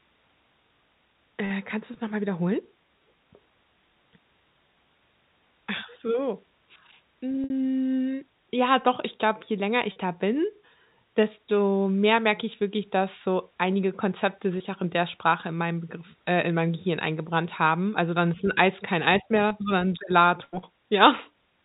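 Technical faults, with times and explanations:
7.44–7.50 s, 9.92–9.96 s and 14.58–14.60 s, packet loss with pitch repetition: 60 ms, 40 ms and 20 ms of audio go missing, consistent with losing 20 ms packets. The receiver fills each gap by looping the last pitch period, so the sound briefly holds with a slightly buzzy, frozen quality. The waveform shows identical repeated cycles tapering in level. On the spectrogram, harmonics run flat and unchanging below the 4 kHz telephone ceiling, then resume moving.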